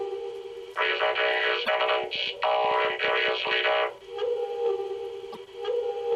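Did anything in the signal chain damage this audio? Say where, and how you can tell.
Yes, at the codec stage, most likely a broken MP3 bit reservoir. At 1.65 to 1.69 s and again at 5.32 to 5.37 s the sound skips forward with a brief garbled glitch, each lasting roughly two frames, which fits 24 ms MP3 frames. When frames go missing, the next frame reaches back into the reservoir for data it stored earlier. It finds unrelated bytes instead, so the first frames after each gap decode wrongly until the stream recovers.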